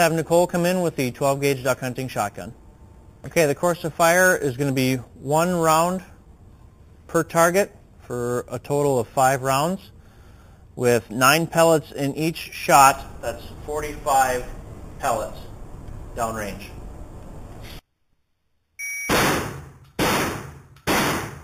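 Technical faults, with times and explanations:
Throughout, imaging from sample-and-hold upsampling: unfiltered repeated samples, likely from an 8 kHz source, leave a metallic fizz about 14 dB down, seen on a spectrogram as mirrored bands from 4 to 8 kHz.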